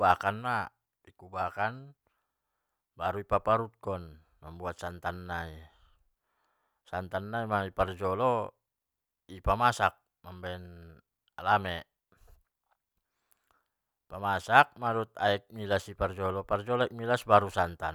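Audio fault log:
No fault can be heard anywhere in the speech. There is nothing to enter in the log.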